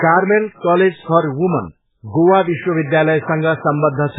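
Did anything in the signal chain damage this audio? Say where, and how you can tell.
Yes, at the codec stage, throughout the speech: nothing remains above 3.8 kHz, and the sound is heavily watery and swirly, which likely comes from MP3 compression at a starved bitrate near 8 kbps. A spectrogram shows a flat ceiling and flickering gaps beneath it.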